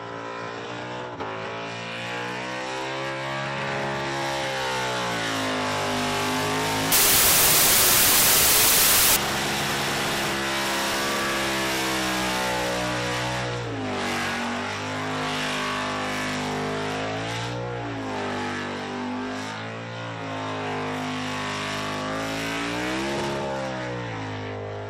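From 6.92 to 9.16 s there's a wrong sample width fault, which fits 16-bit data being read back as packed 24-bit, so most values get stitched from mismatched bytes. It comes through as loud noise with the original sound buried underneath, running 1.5 times too fast and pitched up.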